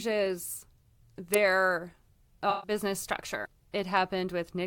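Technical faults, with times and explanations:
1.34 s, electrical switching spike: A sharp snap sits on top of the speech, far too brief and abrupt to belong to the talker or the room. It has the hard edge of an electrical arc rather than an acoustic event, a burst of energy lasting only a few milliseconds. The likely cause is a nearby switch, relay, motor or static discharge arcing for an instant and the audio line picking up that burst.
2.50–2.71 s, AAC frame loss with concealment: For about a fifth of a second the speech loses its clarity and turns into a smeared, noisy, phasey patch before normal detail returns. Around 128 ms of coded audio went missing, which fits a run of roughly six AAC frames. The decoder covered the gap by extending the spectrum of the last good frame with altered phase or interpolated energy, producing that blurred, hollow texture in place of real signal.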